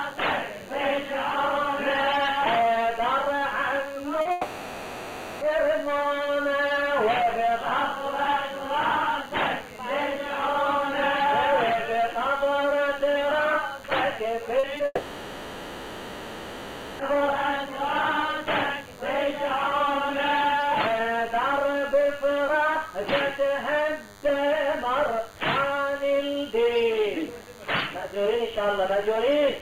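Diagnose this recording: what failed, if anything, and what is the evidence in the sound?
A DECT cordless phone buzz, entering at the analogue wiring stage, runs under the whole recording: a thin, steady buzz at 100 Hz with a dense harmonic series, about 25 dB below the signal. A nearby handset or base transmits a radio burst every 10 ms, and the audio circuit rectifies it. Unlike mains hum, this buzz sits at 100 Hz and sounds edgy rather than smooth.

Short concealed packet loss, a network fault hidden by the receiver, appears at 4.21–4.27 s (40 ms), 14.59–14.65 s (40 ms) and 14.77–14.81 s (20 ms). Each gap was bridged by extending the preceding sound and blending back in, so it is heard as a brief smear or wobble rather than a hard click or dropout to silence.

A long network dropout is the likely cause of the two extended bridged stretches at 4.31–5.43 s (about 1.1 s) and 14.85–17.01 s (about 2.1 s). 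Each follows closely on short losses. The receiver kept extrapolating the last sound as a fading buzz or hiss, with only about 20 ms of true silence at the end of the second stretch. The audio then resumes further on without the missing part. The length of these stretches separates them from the brief concealed gaps.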